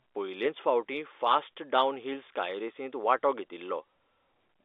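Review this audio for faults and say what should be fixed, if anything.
On listening, nothing stood out that needs fixing; the speech sits within the narrow band of a G.711 telephone line, roughly 300 Hz to 3.6 kHz.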